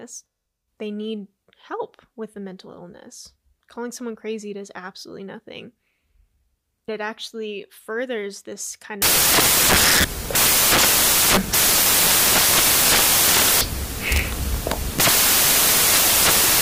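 Speech recording that collapses into loud, harsh broadband noise from 9.02 s, just after "actually furthers this kind", through to the end. The fault is samples built from the wrong bytes: a byte offset or swapped byte order promotes the rapidly changing low bits into each sample's most significant part.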